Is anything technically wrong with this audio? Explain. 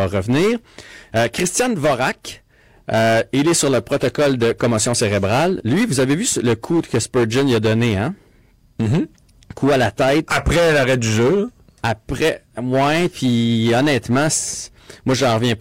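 Yes. The speech has hard clipping from start to finish. The signal was driven about 13 dB past what one stage could pass. Every peak above that ceiling is sliced flat. Roughly one sample in seven sits on the limit. Those squared-off tops add strong high harmonics that were never in the sound. The result is a harsh, buzzy fuzz on every loud syllable, not just occasional crackle.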